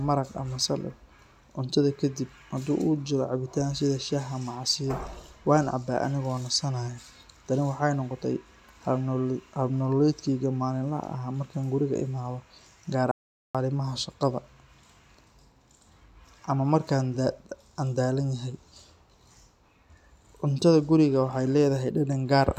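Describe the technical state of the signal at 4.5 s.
At 4.5 s the speech signal is intact, with no dropout, clipping, glitch or other technical fault audible at that point.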